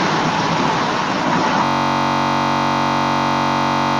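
A system hang loop begins at 1.65 s and runs to the end. The system froze while the audio hardware kept replaying its ring buffer, so a 21.33 ms slice of speech repeats more than a hundred times. That produces a steady buzz at about 46.9 Hz, which fits a 1024-sample buffer.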